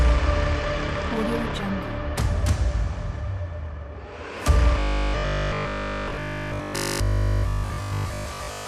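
From 4.80 s to the end at 8.67 s, the sound turns into a rigid metallic buzz at 50 Hz, the robotic sound from repeated short buffers. It likely comes from 20 ms blocks being replayed in place of most missing audio. Unlike mains hum, the buzz replaces the sound itself instead of sitting beneath it.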